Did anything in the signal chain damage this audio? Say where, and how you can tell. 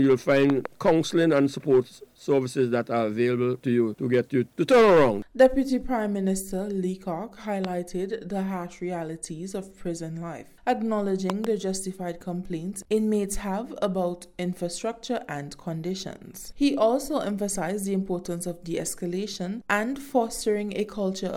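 Yes. Loud pops occur at 0.50 to 0.68 s, 7.65 to 7.67 s and 11.30 to 11.47 s. The first and last are double pops. Each peaks about 15 dB above the sound, which continues underneath. A voltage pulse in the analogue wiring, from a plug or switch, is the likely cause.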